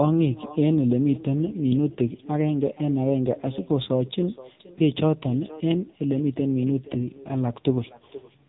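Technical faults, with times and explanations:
Throughout: echo with no canceller. Every phrase is trailed, about half a second later, by a fainter, thinner copy roughly 19 dB below the direct speech. The far end played the call over a loudspeaker, its microphone caught that playback, and no echo canceller removed it, so the sound returned after the network round trip. On a waveform each speech burst has a smaller ghost burst offset to its right. A spectrogram shows faded duplicate harmonic patterns shifted later in time.
Throughout: AMR narrowband mobile codec. The speech sounds buzzy, synthetic and muffled. The heavy damage points to a low AMR-NB mode, fitting a bitrate around 6.7 kbps, where only a few excitation pulses per subframe drive the vocal-tract model. Nothing passes above 3.8 kHz. A spectrogram shows a hard ceiling near 3.8 kHz, with blurred, smeared harmonics and grainy texture below it.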